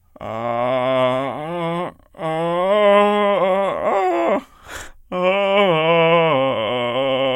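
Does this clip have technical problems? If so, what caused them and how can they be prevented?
No, nothing technical stands out in this music clip, so there's nothing here that needs preventing.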